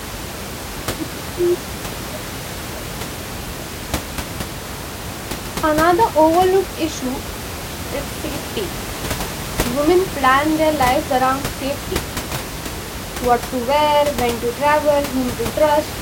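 No technical faults can be heard anywhere in this speech recording.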